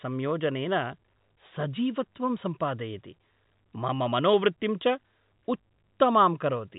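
No technical faults can be heard in this speech, which carries the narrow telephone band of G.711 coding with nothing above 3.8 kHz.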